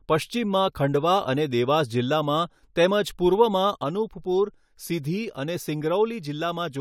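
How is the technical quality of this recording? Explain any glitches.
There's one clear glitch in the recording: a sudden gain jump at 3.84 s. From that point to the end, the whole signal drops by about 4 dB in a single step, with no fade. The speech and the background noise fall together, so the room tone shifts along with the voice. The likely cause is a digital gain setting applied instantly rather than ramped in. The abrupt sample-to-sample change reads as a step down in level.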